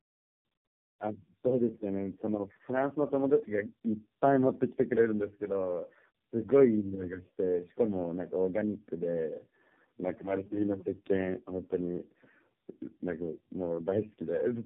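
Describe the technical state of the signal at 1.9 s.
At 1.9 s the speech carries tandem speech coding, present from start to end. The sound fits a chain of four low-rate speech codecs, likely G.726, iLBC and AMR-NB twice, joined by 64 kbit/s telephone links. Each codec re-encodes the previous one's flawed output, so the errors stack. The result is rough, muffled and warbly speech, with nothing above 3.4 kHz.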